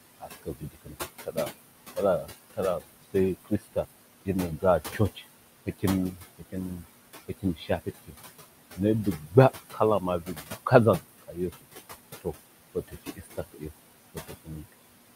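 Noise suppressor artifacts run through the whole clip. A suppressor is estimating the steady background in each frequency band and pulling those bands down frame by frame, by about 19 dB here. The room noise, which sits only about 11 dB below the speech, is not removed evenly. It drops away in the gaps and comes back up under the talking.

Speech cut by the noise suppressor happens in three stretches: 0.2 to 8.15 s, 8.75 to 11.65 s, and 12.21 to 14.74 s. The suppressor mistakes the weaker parts of the speech for noise and turns them down with it, by as much as about 21 dB. Soft consonants and trailing word endings sound swallowed or faded. This adds up to around two seconds of affected speech in the first stretch and roughly a second in each of the other two.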